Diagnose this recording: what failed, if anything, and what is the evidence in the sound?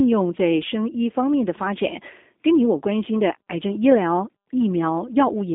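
The fault is at the codec stage: a G.729 codec runs through the whole speech clip. The band is squeezed to a telephone line of about 250 Hz to 3.7 kHz, and nothing survives above 3.8 kHz. Codec damage is plainly audible throughout. The sound points to an 8 kbit/s G.729A stream. This codec does not carry the waveform. It rebuilds speech from a vocal tract filter, a pitch predictor and a few pulses per frame, so the result sounds rough and synthetic.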